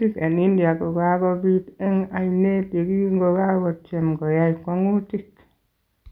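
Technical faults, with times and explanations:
No technical faults are present in this speech recording.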